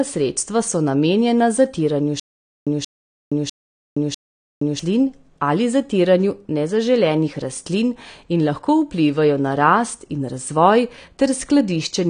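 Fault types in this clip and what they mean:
AAC compression: The whole recording sounds dull and smeared, with plainly audible coding damage. Nothing is heard above 9.6 kHz. This points to likely AAC-LC coding at a low bitrate near 32 kbps, which cuts the top end and starves the remaining bands.
Stutter with silent gaps: From 2.20 s to 4.79 s, a 180 ms burst of speech repeats four times. Each repeat is followed by about 470 ms of digital silence, giving an even 650 ms cycle. The likely cause is a stalled stream replaying its last fragment. The audio for that stretch is lost.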